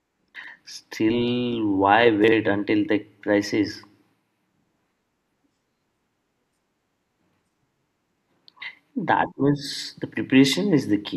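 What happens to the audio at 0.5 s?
Just before 0.5 s, from 0.36 to 0.48 s, the speech briefly scrambles: chunks out of order. One 40 ms slice of audio turns up two chunks late, after the two slices that should follow it. The result is a jumbled moment with three hard joins. Unlike a dropout or skip, no sound goes missing; every piece is still there, only played in the wrong sequence, so the passage sounds shuffled rather than cut.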